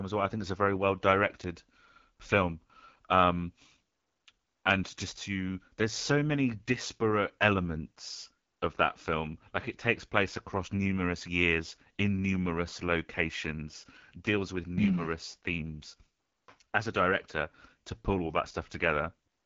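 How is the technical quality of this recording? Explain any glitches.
The recording carries a plainly audible codec fault from start to finish. Throughout, the speech has the AMR wideband (HD Voice) codec sound. A vocal-tract model driven by pulses rebuilds the voice, leaving it rough and raspy, which fits the 8.85 kbit/s mode, one of the two lowest rates. Nothing sounds above 7.3 kHz, and the top band is filled with shaped noise. That hiss up to 7 kHz, rather than a clean cut, separates it from a plain low-pass filter or narrowband telephony.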